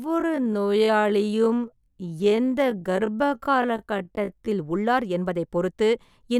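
A likely time-stretch slowed the opening of this speech clip to about 0.56 times its pace, from 0.00 to 4.48 s, holding the pitch by repeating short pieces. That section drags, before normal pace resumes abruptly at "உள்ளார் என்பதைப் பொறுத்து இந்த".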